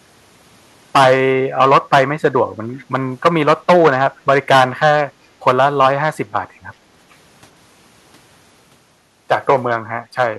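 From 2.78 to 2.84 s a very faint, brief copy of the voice surfaces, roughly 30 dB under the speech and trailing it by about 0.38 s. This is an echo leak, likely from a far-end loudspeaker whose echo canceller let a scrap of returned sound slip through.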